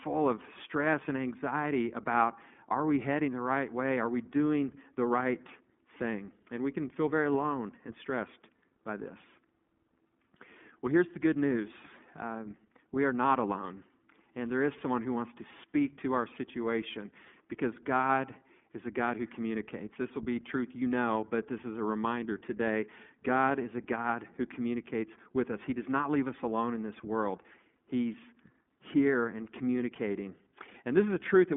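From start to end the speech carries iLBC codec damage. Nothing passes above 3.7 kHz, and each frame's excitation is coded on its own, leaving a plainly rough, synthetic grain. A plain telephone band-limit only dulls the sound; this grain fits 20 ms frames at 15.2 kbps.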